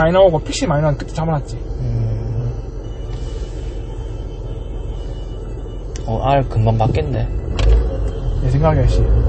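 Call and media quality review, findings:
Likely MP3 compression throughout, bit-starved encoder (consistent with roughly 32 kbps) cutting the top band and dropping weak spectral lines. Nothing above 8.3 kHz, so dull, muffled audio; plainly audible watery, swirling artefacts as components flicker between frames; smeared attacks.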